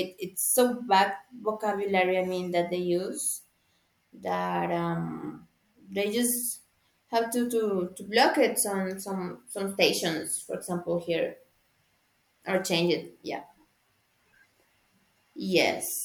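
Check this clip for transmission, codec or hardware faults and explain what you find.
Nothing audible in the speech points to a fault anywhere in the signal chain.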